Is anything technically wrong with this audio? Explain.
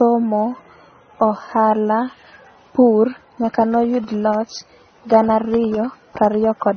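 Yes. Throughout the speech, nothing gets above 6.3 kHz, and mismatched smeary artefacts stack up. That's likely transcoding between lossy codecs, where each pass encodes the last one's damage and keeps the lowest cut-off.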